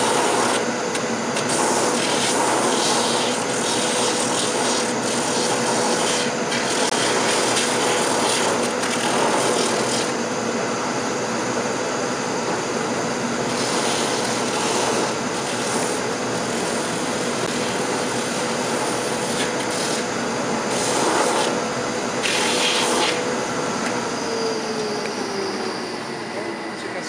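At 6.90 s (20 ms) and 17.47 s (10 ms), a block of digital silence zeroes the sound abruptly: flat-line gaps on the waveform, thin vertical spectrogram blanks edged by broadband streaks.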